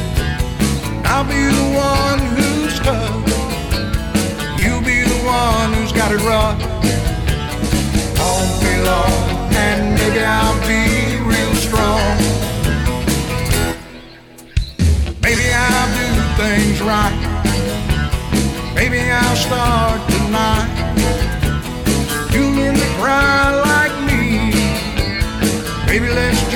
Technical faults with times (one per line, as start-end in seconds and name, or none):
4.59 repeated buffer
15.37 repeated buffer